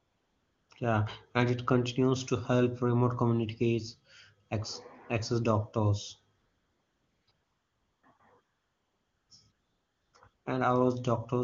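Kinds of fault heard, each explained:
AMR comfort noise: at 0.0, 6.37, 7.31, 8.17, 8.43, 9.51 and 10.33 s, the phone judged the talker silent and stopped sending speech frames for 20 ms to 0.9 s. The receiver substituted smooth synthetic noise, which switches in and out against the real background.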